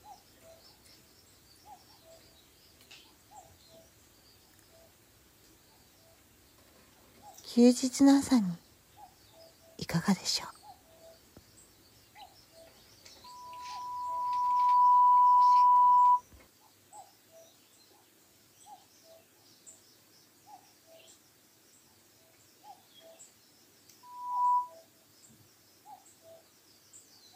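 At 13.24 s a loudspeaker feedback squeal sets in: a pure tone near 988 Hz swells over about a second and a half until it sits around 15 dB above the programme, then stops at 16.22 s. The microphone is re-amplifying its own loudspeaker, and at that frequency the loop gain exceeds unity. The same 988 Hz tone returns from 24.03 to 24.74 s, rising faster and peaking lower, roughly 10 dB above the audio.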